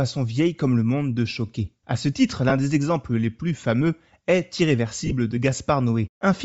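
Throughout the speech there is a breathy, grainy edge on the upper frequencies, with the top of the spectrum sounding thin and noise-filled rather than detailed. This is plainly audible codec damage, likely from Bluetooth LC3 compression at a low bitrate. The sound fits an LC3 stream at around 32 kbps, where the encoder discards much of the high band and the decoder fills the gaps with shaped noise.

At 2.49–2.52 s, between "ce titre" and "des exemples les plus", lost LE Audio frames leave a brief rough, noisy patch of about 15 ms. That duration is consistent with two 7.5 ms frames. The decoder concealed the gap by repeating the previous spectrum with randomised phase, so the sound smears into noise for an instant. At 5.06–5.12 s, just after "les plus fameux est", a second cluster of losses totals about 37.5 ms, scattered across roughly 60 ms, with the longest unbroken run around 15 ms. 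It is heard as a grainy smear.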